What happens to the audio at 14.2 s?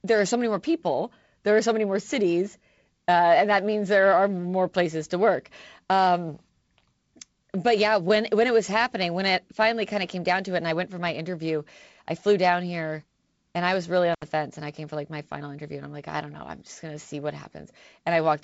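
An intermittent contact fault hits the speech from 14.13 to 14.23 s. A loose cable or plug briefly loses its connection, so the signal path is broken for about 70 ms before the contact closes again. You hear the speech drop out abruptly, with crackle as the connection breaks and again as it restores, and faint hiss filling the short gap where the signal should be.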